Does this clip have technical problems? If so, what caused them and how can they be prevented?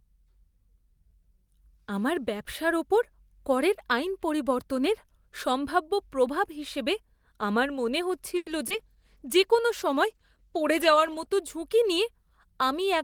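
Yes. Right after "প্রভাব হিসেবে আমার মনে", from 8.37 to 8.48 s, there is a short stall from a late packet. The jitter buffer ran dry, so the last sound was held for about 90 ms. Then playback resumed with nothing lost, just 90 ms later. A deeper jitter buffer would absorb this.

From 8.68 to 8.72 s there is a short concealed packet loss. About 20 ms of audio never arrived. The receiver continued the previous sound over the gap, which leaves a brief smear. Forward error correction or redundancy would help recover such losses.

A call bitrate drop runs from 8.77 to 11.32 s, ending just before "ঝুঁকি নিয়ে". The encoder went from 32 to 14 kbps and stayed at that lower rate for about 2.5 s. The speech sounds coarser and duller throughout this stretch. A more stable network path or gentler bandwidth estimation would prevent it.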